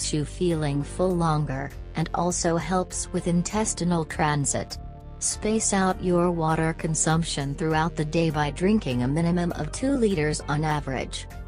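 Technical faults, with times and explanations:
No technical faults can be heard anywhere in this audio.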